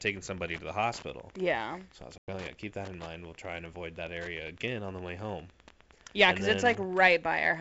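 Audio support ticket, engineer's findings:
Wi-Fi interference throughout. Steady ticking near ten per second, matching a 102.4 ms beacon, roughly 25 dB under the speech. Nearby radio rectified by the audio circuit.

Packet loss on an ADPCM call, 2.18 to 2.30 s, after "I was". Hard 100 ms silence, a handful of packets. Speech returns at "oh yeah keep that" with slight distortion. The G.722 ADPCM decoder's predictor and step size lost sync with the sender.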